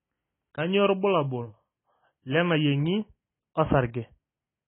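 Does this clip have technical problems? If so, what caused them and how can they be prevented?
Yes. All the way through, this speech sounds dull and smeared, with nothing at all above about 3.8 kHz and a warbly, fizzy texture on the sibilants and held sounds. That's most likely AAC compression at a very low bitrate, around 16 kbps for AAC-LC. With so few bits per frame, the encoder chops off the top of the spectrum, leaves gaps in the bands it keeps, and coarsely quantises what's left. To prevent it, encode at a higher bitrate, or keep a lossless master and only compress once at the end.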